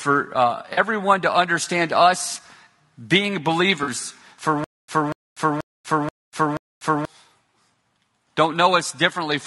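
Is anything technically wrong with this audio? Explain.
Yes, there are three kinds of fault in this speech clip.

Low-delay AAC compression runs through the whole recording and is plainly audible. The coding is likely AAC-ELD at a low bitrate, which fits about 32 kbps. This low-delay codec works in very short frames that cannot separate the voice's pitch harmonics cleanly, and at this bitrate it leaves too few bits for the detail. The speech sounds rough and grainy, with noise filling the gaps between harmonics and a thin, synthetic-sounding top band.

AAC frame loss with concealment occurs twice: from 0.73 to 0.79 s, just before "to understand us", and from 3.83 to 3.89 s. Each gap is about 40 ms of missing audio, which fits two lost frames. The decoder covers each hole by rebuilding sound from the last good spectrum, with randomised or interpolated content rather than the real signal. 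Each patch is brief and sounds smeared, noisy or phasey.

A stutter with silent gaps runs from 4.64 to 7.05 s. The likely cause is a player or stream that stalled and, on each retry, replayed its last buffered fragment before running dry. A burst of about 240 ms of the same sound repeats five times at an even pace of about 482 ms, with roughly 242 ms of digital silence between repeats. The speech that should have played across that stretch is lost.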